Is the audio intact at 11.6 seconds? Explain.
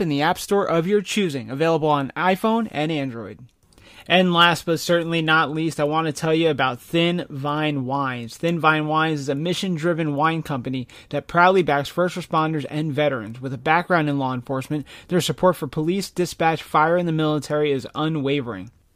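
Yes, the speech at 11.6 seconds plays through intact, with no audible fault at that moment.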